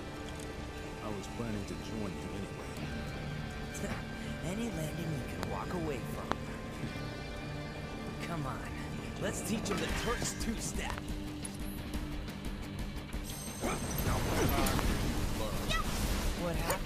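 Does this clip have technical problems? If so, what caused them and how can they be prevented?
Yes, there are loud pops at 5.43, 6.32 and 14.79 s, plus a quick double at 10.90 to 11.00 s, each spiking roughly 20 dB above the sound (about 25 dB at 6.32 s), likely from static discharge or a switching or driver glitch. Secure cables, ground the setup properly, and avoid switching gear mid-recording.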